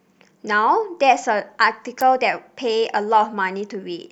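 At 2.01 s a sharp snap cuts across the speech, peaking not far below full scale. This is an electrical switching spike, most likely a nearby switch, motor or static discharge arcing and being picked up on the audio line. What separates it from a digital click or dropout is that the speech carries straight through underneath: nothing is lost or repeated. A brief burst of energy is simply laid over the sound for about 12 milliseconds.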